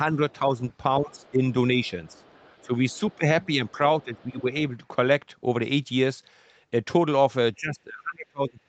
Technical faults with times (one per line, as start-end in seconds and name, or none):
0.12-4.46 speech suppressed in double talk
0.30-1.31 other side's voice leaking through
1.84-4.41 other side's voice leaking through
7.57-8.69 speech suppressed in double talk